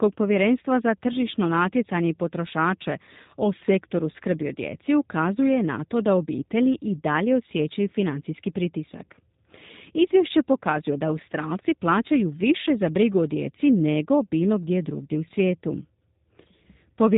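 From start to finish the speech has gone through a G.729 codec, and it's plainly audible: nothing above about 3.8 kHz survives, and the voice comes out rough and a bit synthetic, rebuilt from filter and pulse models, which fits an 8 kbit/s VoIP link.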